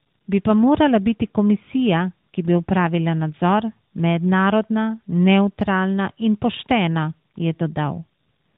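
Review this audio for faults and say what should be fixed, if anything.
Tandem speech coding runs throughout the clip. The speech was decoded and re-encoded at each network border, so each coder worked on the previous one's degraded output. The result is rough, muffled and warbly, with nothing above 3.8 kHz. The sound points to a CVSD stage followed by G.711 A-law and AMR-NB at 12.2 kbit/s. To prevent this, carry the call end to end in one codec or pass the coded stream through without decoding (transcoder-free operation).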